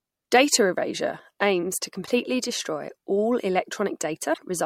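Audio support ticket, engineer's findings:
Damaged data in the compressed stream: short glitches at 2.03–2.09 s and 4.30–4.39 s, decoder misreading corrupt frames and losing sync until the next frame header.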